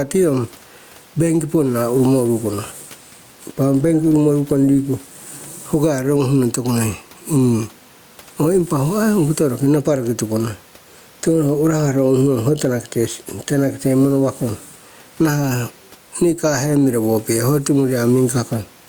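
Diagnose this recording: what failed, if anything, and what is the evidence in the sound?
Gain pumping runs through the whole recording, with a gain swing of around 10 dB; the room noise sits about 39 dB below the speech. This is likely an input-gain fault at the microphone preamp, with gain set far too high so that a fast limiter or compressor clamps down on every loud sound and releases in the gaps. The result is squashed speech with loud and soft parts pulled close together.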